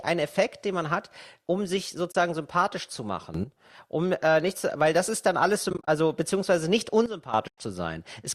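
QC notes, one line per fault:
2.12–2.15 s, AAC frame loss with muting: a 30 ms soft-edged gap, about three 10 ms frames zeroed by the decoder. The overlapping windows fade it in and out.
3.34–3.44 s, sudden gain jump: after "sympathisch zu", sound and background noise together step up about 12 dB at once, likely an unramped digital gain change, not compressor pumping.
5.70–5.88 s, AAC frame loss with muting: between "das ist dann alles" and "beziehungsweise nicht", 110 ms of scattered holes over 180 ms, the longest around 30 ms, each faded at the edges.
7.06–7.34 s, sudden gain jump: after "beziehungsweise nicht", level and noise floor drop together by about 12 dB abruptly, likely an unramped gain setting rather than a fade.
7.48–7.58 s, AAC frame loss with muting: a 100 ms muted hole, about ten consecutive frames, with window-smoothed edges instead of the sharp click of a sample-level dropout.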